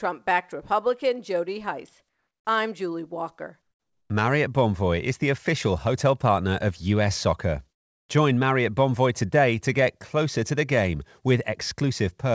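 The audio has passed through a call path, with nothing above 8 kHz, which points to a wideband codec such as G.722. Twice the real background drops out and steady, featureless hiss takes its place: from 2.09 to 2.45 s, and from 3.62 to 4.10 s. Each patch is about 4 to 5 dB quieter than the background it replaces. That background sits around 56 dB below the loudest parts. This is likely comfort noise in place of the background, generated while transmission paused.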